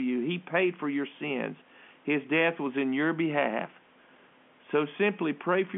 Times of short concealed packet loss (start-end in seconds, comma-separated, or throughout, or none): none